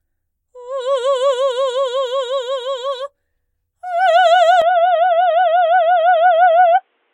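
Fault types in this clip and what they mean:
Input switched to a poorer device: at 4.62 s the music abruptly loses everything above 3.8 kHz and turns dull and boxy through to the end, with no gap and little level change, likely from recording moving to a narrower-band microphone, adding faint new noise well below the signal.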